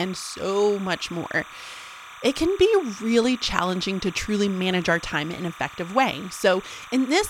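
Timecode bleed runs under the speech from start to finish. Linear timecode from a nearby track or cable has leaked into the audio path. The code is a square wave flipping between two pitches, around 1 kHz and 2 kHz. It is clocked at 30 frames per second, so the pattern cycles fast and never stops. It sits roughly 20 dB below the speech. The result is a steady chirping warble behind every phrase.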